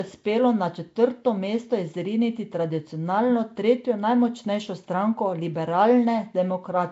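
Nellymoser compression runs through the whole of this speech clip: the sound has a rough, hissy halo and a smeared, underwater quality, with nothing above 7.7 kHz. It is likely the Nellymoser Asao codec, which codes short fixed blocks at a low bitrate (here fitting about 32 kbps) and fills weak bands with noise. Clock slip clicks run from 0.11 s to 6.9 s as a soft, fast rattle of ticks, roughly every 30 ms, heard on the louder sustained parts of the speech. The likely cause is two unsynchronised clocks differing by around a thousandth, so a single sample is dropped or repeated each time the drift adds up to one sample.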